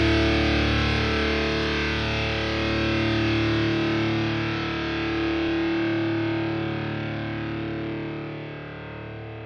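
Nothing stood out on listening; no technical problem could be heard anywhere in the audio.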